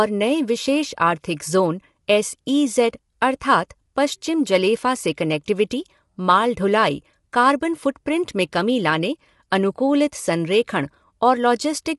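Throughout the speech, the voice sounds rough and grainy, with noise between the harmonics and nothing above 11.6 kHz. This is likely low-delay AAC compression at roughly 32 kbps. A spectrogram shows blurred harmonic lines over a noisy floor and a hard ceiling at 11.6 kHz.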